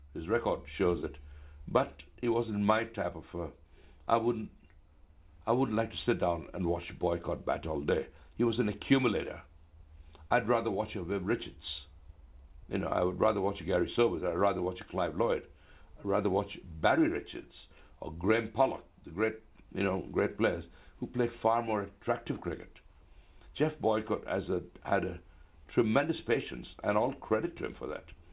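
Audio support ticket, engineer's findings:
No faults found; content tops out at 4 kHz, consistent with a narrowband G.711-style call path working as designed.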